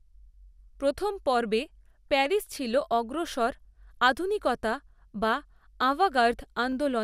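Two clocks that likely disagree by around 100 ppm let the buffer between them drift until it has to drop or repeat a small block of samples, only a handful each time. These clock drift buffer slips recur every 1.49 s, from 0.77 s to 6.72 s, about five in all. Each one is heard as a brief, regular click cutting into the speech, evenly spaced in time rather than following the sound.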